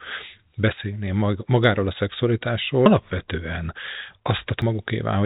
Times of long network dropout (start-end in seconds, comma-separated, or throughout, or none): none